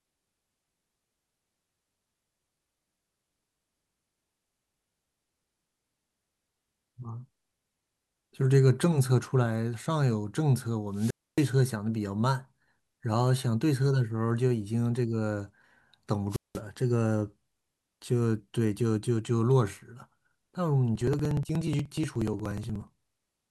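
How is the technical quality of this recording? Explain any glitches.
The recording has two kinds of glitch: wireless squelch mutes in the middle and a run of rhythmic ticking near the end.

A wireless microphone squelch dropout occurs from 10.91 to 11.55 s, and again from 16.29 to 16.61 s. The FM signal weakens and the receiver's squelch shuts the output: hiss swells, then roughly 274 ms and 189 ms of near silence before speech returns. The rising static before each hole separates these from digital dropouts.

Periodic USB or driver dropouts occur from 20.96 to 23.42 s. A stalled bus or driver skips a few milliseconds of audio every 0.06 s, dozens of times, producing an even ticking that sounds only under speech. Unlike the squelch mutes, these are tiny, evenly spaced, and carry no hiss.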